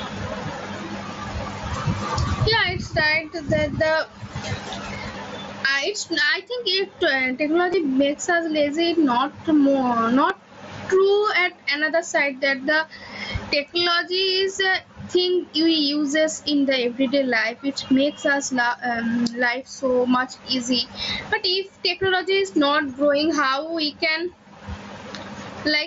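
Gain pumping runs through the whole speech clip, with a level swing of about 25 dB. The likely cause is excessive input gain followed by a fast limiter or compressor.

Concealed Bluetooth headset packet loss appears at 5.12–5.14 s, 7.72 s and 10.29 s. The receiver fills each gap by repeating a recent stretch of waveform. The first two are short runs of three and two lost frames, heard as a brief buzzy tone with a small warble where real audio returns; the last is a single lost frame and is nearly hidden.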